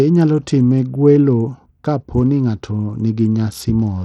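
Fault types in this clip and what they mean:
Bluetooth SBC compression: Throughout the speech the treble is thin and unstable, dropping out and flickering, with a gritty, grainy noise and aliasing riding on the sound. This is plainly audible damage, likely from SBC encoding at a low bitrate, which fits roughly 80 kbps. With so few bits, the upper sub-bands get little or nothing and the remaining bands are quantised coarsely, since the codec has no real hearing model to hide the errors.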